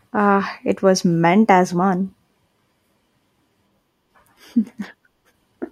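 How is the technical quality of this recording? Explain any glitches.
There are no glitches to report in this recording.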